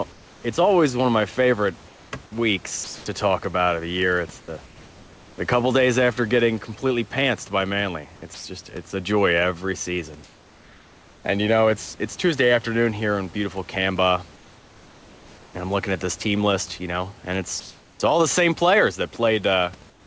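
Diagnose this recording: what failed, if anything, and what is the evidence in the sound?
In the pauses the room background turns into a smooth, featureless hiss at 0.12–0.44 s, 1.88–3.06 s (between "one of my favorite" and "to talk about of"), 4.40–4.48 s, 10.24–11.24 s, 14.36–15.54 s (ending at "and I'm looking at"), 17.60–18.00 s (between "know and" and "all the same players") and 19.90–20.07 s. It is mostly about 3 to 4 dB quieter than the real background, but about 2 dB louder at 17.6 s. This is comfort noise in place of the background, likely from discontinuous transmission at the call-processing stage. The sender stopped sending during silence, and the receiver synthesised noise shaped like the room. The band-limit at 8 kHz heard throughout points to a G.722 call path.

At 8.34–8.44 s, about 100 ms of sound vanishes and the same steady synthetic noise fills the gap before the sound returns. 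This is sound dropped by the voice detector, again at the call-processing stage. The sender's detector likely judged this stretch of sound to be background and stopped transmitting. The receiver then played comfort noise for that tenth of a second until the detector triggered again.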